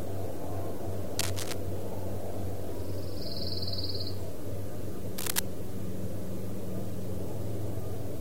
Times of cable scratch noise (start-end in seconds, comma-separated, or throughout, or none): 1.19-1.54, 5.18-5.39